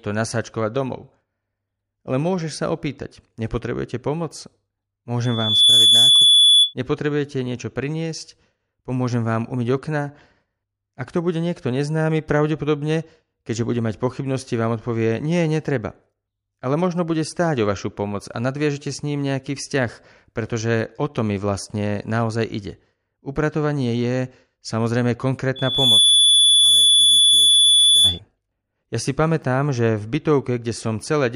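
A piercing 3.4 kHz tone swells over about 0.4 to 0.5 seconds, roughly 10 dB above the speech, from 5.23 to 6.74 s and again from 25.56 to 28.20 s. This is loudspeaker feedback squeal: the microphone re-amplifies its own loudspeaker until the loop runs away at that frequency.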